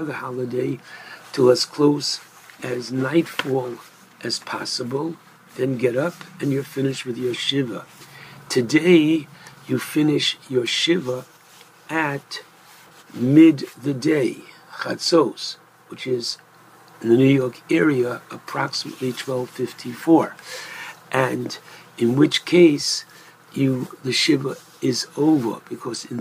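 No technical faults are audible.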